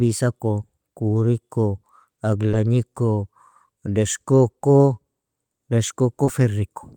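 Short concealed packet loss occurs twice in this speech, at 2.51 s and 6.25 s. Each time about 20 ms of audio arrived too late for the decoder. The receiver filled the gap by extending the preceding sound, then blended back. Each gap is heard as a brief smear or wobble.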